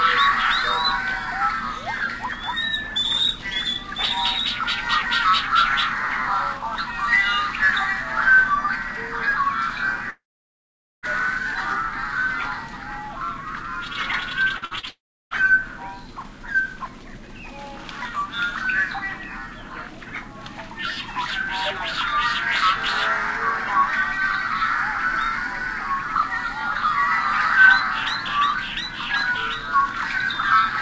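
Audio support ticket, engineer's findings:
Long network dropouts, 10.10 to 11.06 s and 14.89 to 15.34 s: sound stops, a brief fading continuation, then silence for about 0.84 s and 0.33 s. Resumes further on with roughly 0.93 s and 0.42 s lost. Likely jitter buffer starved by a network outage.

Burst of packet loss, 14.57 to 14.65 s and 14.65 to 14.74 s, back to back: last sound held and faded into a buzz or hiss, about 60 ms missing each. Receiver concealment bridging consecutive lost or late packets, then skipping ahead.

Short concealed packet loss, 14.80 to 14.86 s: brief smear or wobble where about 30 ms never reached the decoder. Concealment extended the preceding sound and blended back in. Sits inside the 14.6 to 15.3 s loss cluster. The G.722 path at 64 kbps passes nothing above 8 kHz.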